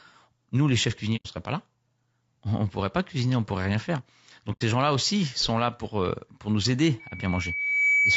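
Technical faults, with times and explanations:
Throughout: low-delay AAC compression. The likely cause is a low-delay AAC coder such as AAC-ELD, whose short frames resolve pitch harmonics poorly, and the plainly audible damage fits a bitrate near 32 kbps. The speech sounds rough and grainy, with noise filling gaps between harmonics.
1.16–1.27 s and 4.52–4.63 s: AAC frame loss with muting. Each time, about 90 ms of coded frames, roughly three, went missing, and the decoder zeroed their spectrum. The overlapping windows fade the speech out and back in, leaving a soft-edged gap.
6.99–8.16 s: loudspeaker feedback squeal. The microphone picks up its own loudspeaker, and at 2.3 kHz the loop gain exceeds one. That tone grows over about a second into a steady squeal, ending around 5 dB louder than the speech and running to the end.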